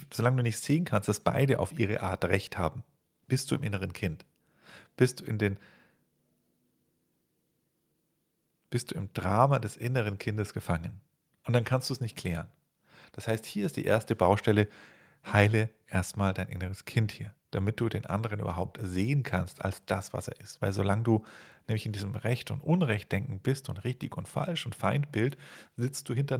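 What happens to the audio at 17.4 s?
Nothing goes wrong at 17.4 s; the speech carries on intact through that moment, with no dropout, click, glitch or other fault to be heard there.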